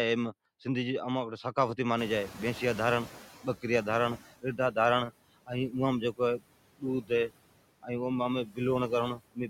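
From the start, the background sinks in the gaps and swells back under the speech. These are noise suppressor artifacts: the suppressor lowers, frame by frame, every band it judges to be steady noise, here by about 20 dB, so the residue it leaves shifts from moment to moment.

At 1.98 s the room noise jumps by about 23 dB, settling about 16 dB below the speech, and for the next 2.25 s, until 4.23 s, it comes through louder before gradually sinking away. This is the noise suppressor catching up. Its noise estimate was still tuned to the quieter room, so at first it cut only about 12 dB, and the noise faded only as the estimate adapted to the new level.

Four times the speech itself sounds swallowed: from 4.42 to 4.77 s, 7.02 to 7.11 s, 8.45 to 8.59 s, and from 9.15 s to the very end. In each, roughly a tenth of a second of soft sound turns faint, about 0.15 s in the third. This is speech cut by the noise suppressor, which mistook those low-level parts of the speech for background and turned them down along with it, by about 14 dB, 16 dB, 15 dB and 22 dB respectively.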